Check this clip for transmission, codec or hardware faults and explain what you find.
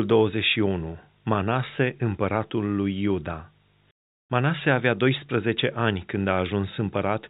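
No transmission, codec or hardware faults can be heard in the speech. The sound carries the character of G.711 telephone coding at 64 kbps, with nothing above 4 kHz and only a faint, level-following quantisation hiss beneath the signal, which is normal for that path.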